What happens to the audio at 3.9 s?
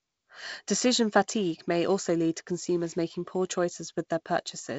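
Nothing goes wrong at 3.9 s; the speech carries straight through with no dropout, glitch or added artefact at that point.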